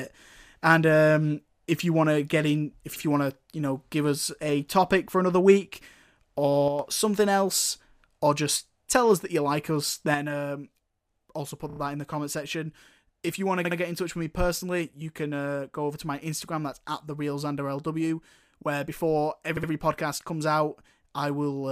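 Repeated frames at 2.96 s: a 64 ms stretch of compressed data is decoded twice, so the speech stutters briefly.

One channel drops out at 6.68 to 6.79 s: the level falls abruptly by about 6 dB for roughly a tenth of a second, likely because one stereo side vanished before the mono sum.

The same level drop returns at 10.14 s and lasts to the end. The speech sits about 6 dB lower from there on, consistent with one channel going missing.

Repeated frames at 11.70 s: a 32 ms block plays three extra times, adding 96 ms and producing a rapid stuttering flutter.

Repeated frames at 13.65 s and 19.57 s: each time a 64 ms block plays twice more, adding 128 ms, and the speech audibly hiccups.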